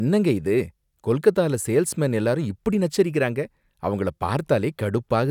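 No technical faults are audible anywhere in the speech recording.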